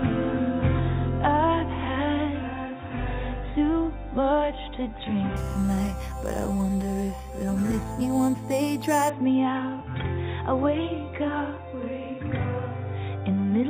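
Imaging from sample-and-hold upsampling runs from 5.36 to 9.10 s. Each sample was repeated without smoothing, which points to a jump from 8 kHz to 44.1 kHz, so mirrored spectra sit about 20 dB down. The lowest copy fills 4 to 8 kHz as a metallic fizz that tracks the sound's level and moves against its pitch.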